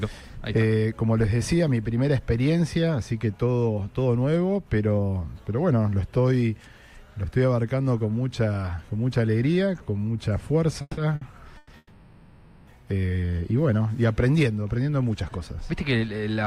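A cluster of call audio freezes breaks up the audio between 10.81 and 12.69 s: at 10.81 to 10.99 s, 11.57 to 11.71 s, and the longest at 11.77 to 12.69 s. Each time the last sound hangs on as a fading buzz. The first dies into about 30 ms of silence and the long one into about 20 ms. The audio then resumes exactly where it left off, so nothing is lost, but roughly 160 ms, 120 ms and 900 ms of delay pile up. The likely cause is packets held up in transit until the jitter buffer drained. On a spectrogram each freeze shows as horizontal smeared bands that thin out, and the waveform as a repeating, shrinking envelope, with a flat tail where it falls silent, before normal detail returns. Between the first two freezes, a short stall from a late packet at 11.15 to 11.23 s stretches one sound by 60 ms with a slight buzzy dip. It appears as a brief stretch of copied, slightly lower-level cycles in the waveform and a short streak of held harmonics on the spectrogram. 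From 15.29 to 16.44 s a jitter buffer speed-up makes the audio run at 108% of normal speed at unchanged pitch, trimming about a tenth of a second of surplus buffered delay. It sounds hurried, and close inspection shows harmonic lines at steady frequency with tiny seams where one or a few pitch periods were cut out.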